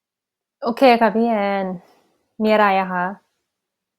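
Nothing goes wrong anywhere in this short speech recording; there's no technical fault to point to at any moment.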